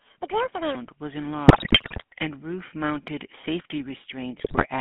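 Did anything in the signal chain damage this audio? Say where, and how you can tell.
Yes. The whole clip has passed through a GSM full-rate codec. The band runs only from 150 Hz to 3.4 kHz. The speech has a plainly audible buzzy, gravelly roughness, which fits the 13 kbps full-rate coder. It rebuilds the voice from a vocal-tract model driven by sparse pulses.

From 0.0 to 0.75 s the speech runs at double speed. It sounds hurried, and its pitch sits roughly ten semitones high. Speed and pitch rise together, so this is a section at the wrong speed. The likely cause is playback or editing against the wrong clock.

GSM bit errors appear from 1.48 to 2.04 s and again from 4.38 to 4.67 s. The speech breaks into squawks, pops and gargling in both spans. Corrupted filter, pitch and gain values reached the decoder over a weak radio link. The damage points to an error rate of several percent.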